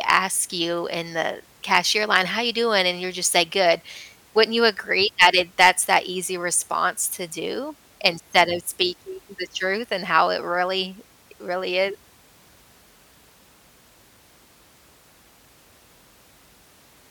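A stage in the chain was driven about 4 to 6 dB past its limit, so the peaks of this speech were cut flat: hard clipping at 0.10–0.17, 1.75–1.78, 5.21–5.96 and 8.06–8.41 s, heard as crackle on loud syllables.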